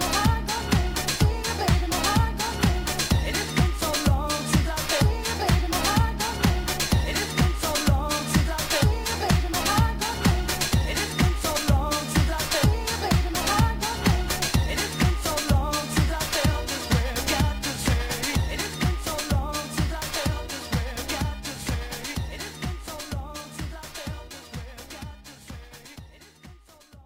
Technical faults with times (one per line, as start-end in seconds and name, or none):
0.00-27.06 sample clock jitter